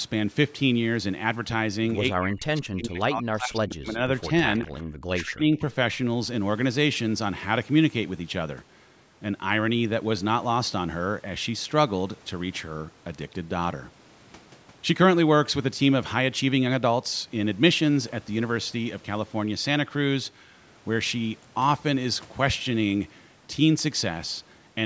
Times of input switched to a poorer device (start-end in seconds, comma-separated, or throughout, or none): none